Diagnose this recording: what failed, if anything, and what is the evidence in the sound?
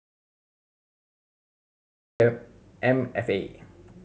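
The front of this one is an audio dropout to silence: from the very start the file is dead silent, not even room tone, until the speech comes in abruptly at about 2.2 s. The input was already gone when recording began, so the first 2.2 s of the speech simply weren't captured. The most likely culprit is the input stage, a mic or interface link that wasn't connected or was muted, while the recorder kept writing silence.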